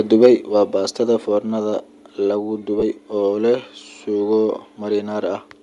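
Throughout this speech recording there's a breathy, grainy edge on the voice, with the top of the spectrum sounding thin and a bit noisy. That's most likely Bluetooth LC3 compression. The LE Audio codec works in short transform frames, here consistent with 10 ms, and at the rate this sounds like, around 48 kbps, it drops a lot of upper-band detail and patches it with shaped noise, which is where the fizz comes from. Right at the start, from 0.22 to 0.27 s, just before "waa baastada foornada lagu", there's a harsh, crackly edge on the peak. That likely reads as microphone overload: the input level was running about 4 dB too hot, so the loudest bits hit the converter's ceiling and got their tops flattened, and something like a tenth of the samples in that stretch are clipped. Straight after that, at 0.26 s, the whole level (voice and background together) drops by about 2 dB in one step. It happens again at 1.26 s, between "waa baastada" and "foornada lagu", this time by about 3 dB. 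That pattern is the microphone volume being stepped down, likely the call software reacting to the clipping by pulling the device's input gain down in discrete jumps rather than riding it smoothly. Finally, from 2.80 to 2.83 s there's a brief smeared, noisy blip where the voice loses its tonal clarity. That's lost LE Audio frames: about 20 ms went missing, which fits two 10 ms frames, and the decoder filled the gap by reusing the last spectrum with scrambled phase, so it comes out as a short wash of noise.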